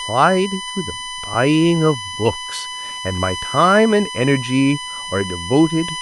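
Right from the start there's USB whine running under the whole speech track, a steady tone pitched at 1 kHz with its strongest component up at the third harmonic, 3 kHz, so it reads as a thin, piercing squeal more than a hum. It's sitting only about 10 dB below the speech, which is loud. The 1 kHz spacing points to current drawn in the USB bus's 1 ms frames leaking in through the power or ground.

At 1.34 s there's a repeated buffer: fresh audio didn't show up in time, so the interface replayed the last chunk it had, and that chunk went round three times in total. Each piece is tiny, which fits a 5 ms buffer, so instead of an audible stutter you get a quick buzzy tick with hard joins at each repeat. Nothing of the speech seems to go missing; it's inserted rather than dropped.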